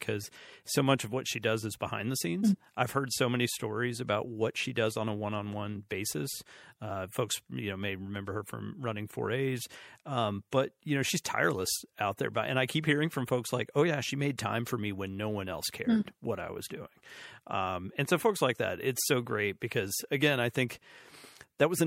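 Throughout the speech, MP3 compression damage is plainly audible. The sound is watery and swirly, with metallic chirps on s sounds and smeared attacks. Weak frequency lines likely drop in and out between frames as the encoder runs short of bits, which fits a rate near 64 kbps.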